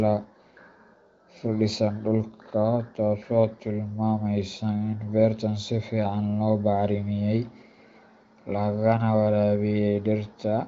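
No faults found; the speech shows the band limit of AMR wideband (HD Voice) coding, with nothing above 7.3 kHz, which fits the codec's 23.05 kbit/s mode.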